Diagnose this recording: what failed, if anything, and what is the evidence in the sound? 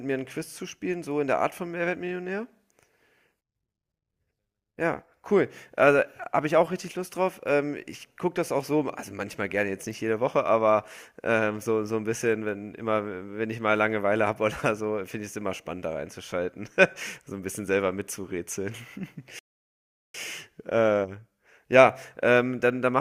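The failure sits at the playback stage: a playback stall. At 19.39 s the speech cuts off in mid-flow and the output falls completely silent until 20.14 s, a gap of about 0.75 s, before the audio resumes. A clean silence of that length inside running speech points to the player likely running out of buffered data or having its output thread blocked, holding output silent until it recovered.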